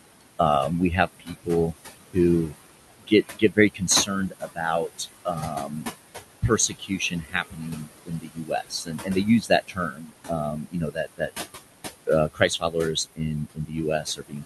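Throughout the clip, noise suppressor artifacts are audible. The room noise, sitting about 11 dB below the speech, is pulled down by about 19 dB in the pauses and swells back under each phrase. That pumping marks the suppressor's frame-by-frame gain and not the room itself.

The suppressor also mistakes parts of the speech for noise, cutting speech at 1.07–1.74 s (just after "um we"), 2.99–4.6 s and 4.98–5.93 s. The drops there are about 18, 18 and 13 dB. At 6.42–11.3 s, roughly three seconds of speech are affected, and the cut then runs from 12.07 s to the end, both reaching about 21 dB. Soft consonants and endings fade out along with the background instead of breaking off, so there are no clicks or hard gaps of the kind packet loss leaves.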